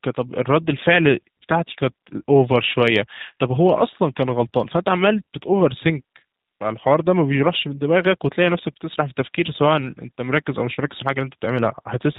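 From the first moment to the end, the speech carries the sound of the G.729 codec, and it's plainly audible. Everything above 4 kHz is simply gone, so it's boxy and telephone-narrow. The voice is being rebuilt from a vocal tract filter and a pitch predictor with a handful of pulses per 10 ms frame, which gives that slightly rough, synthetic edge. It all fits an 8 kbit/s VoIP link.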